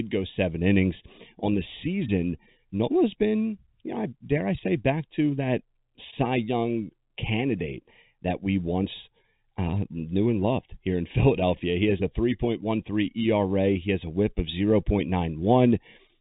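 From start to end, the speech has channel delay comb filtering. One channel lags by about 0.4 ms, so the mono sum notches near 1.5 kHz, sounding hollow within the telephone band.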